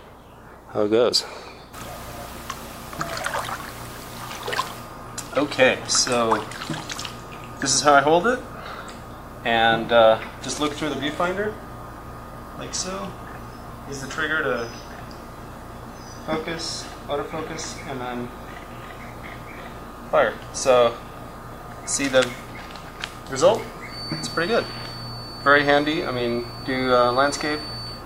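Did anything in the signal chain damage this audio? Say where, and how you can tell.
Yes. From 23.85 s to the end of the clip a thin, steady whistle at 4.5 kHz sits behind the sound, well below the main signal, swelling and fading slowly in level. That is a feedback whistle, most likely from an acoustic loop where loudspeaker output reaches the microphone with gain just at the edge of oscillation. Unlike a runaway howl it never grows, and unlike electrical interference its level drifts rather than holding perfectly constant.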